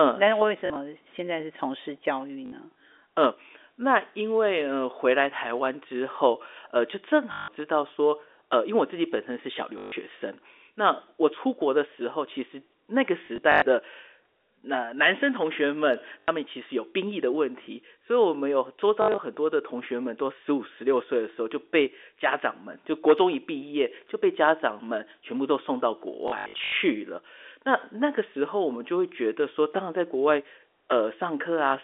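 Speech over a narrow telephone band breaks into brief robotic, buzzing stutters at 0.6, 2.46, 7.32, 9.78, 13.26, 16.2, 19.02 and 26.28 s, each lasting 60 to 440 ms. The cause is packet loss with the last packet repeated. The looping fits 20 ms packets, which makes a buzz near 50 Hz.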